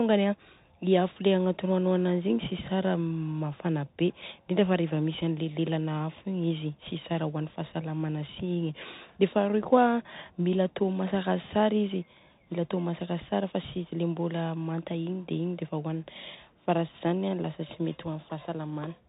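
Bluetooth CVSD headset codec, throughout: a one-bit delta coder, fitting a 64 kbps link, cuts everything above 4 kHz, leaving scratchy s sounds, distorted loud peaks and granular hiss under the speech.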